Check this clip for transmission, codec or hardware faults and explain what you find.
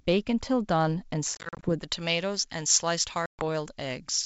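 Two faults are audible: packet loss on the ADPCM link, twice, and pre-emphasis left on for the second half.

Packet loss on an ADPCM call, 1.35 to 1.70 s and 3.26 to 3.43 s. First, 160 ms goes missing in gaps of up to 40 ms spread over 280 ms; second, 130 ms drops out. Silence fills each hole. The decoder's predictor and step size then mismatch the sender's, so audio resumes with brief distortion.

Pre-emphasis left on, 1.83 s onward. The treble was boosted, fitting a J.17 curve, but never cut back, leaving 10 kHz about 11 dB above 1 kHz. The sound turns thin, bright and sibilant, riding over the G.722 wideband band's faint upper hiss.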